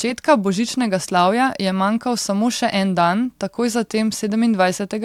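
A short speech recording with no audible technical faults anywhere in the signal.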